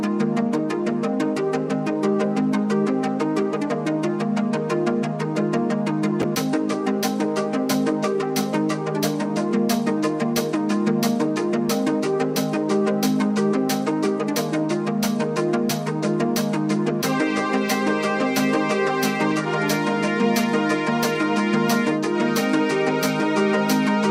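Right around 6.22 to 6.24 s there's a brief case of chunks out of order: one 10 ms slice of audio turns up one slot late, swapped with its neighbour. Nothing goes missing, but the three hard joins leave a tiny jumbled blip.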